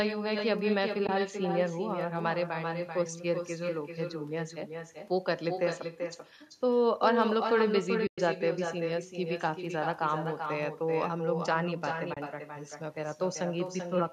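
Throughout the speech, every phrase is trailed by a quieter, thinner copy arriving roughly 400 ms later at about 6 dB below the original. This is echo with no canceller: the far end's loudspeaker feeds its microphone, and nothing subtracts that returned signal before it travels back.

Three soft-edged holes then appear, fading out and back in: 1.07 to 1.09 s, 8.07 to 8.18 s (the longest, about 110 ms), and 12.14 to 12.17 s. These are AAC frame loss with muting. The decoder zeroed the missing frames' spectrum, and overlapping windows smoothed the edges. The gaps fit runs of 2, 11 and 3 frames of 10 ms.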